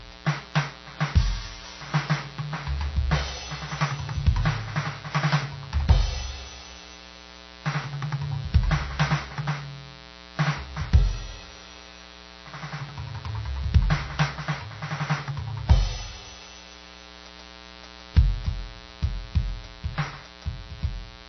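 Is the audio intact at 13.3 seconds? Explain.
No. At 13.3 seconds the music carries a mains buzz, present for the whole clip. Sharp switching spikes on a 60 Hz supply, twice per cycle, add harmonics reaching several kilohertz. The result is a steady, raspy buzz, roughly 20 dB below the music.

The sound also has nothing above 6.1 kHz, and two different kinds of codec artefacts sit on top of each other. That points to transcoding between lossy codecs, likely a low-rate MP3 re-encoded as HE-AAC. The second encoder spent its bits on the first one's artefacts and added its own.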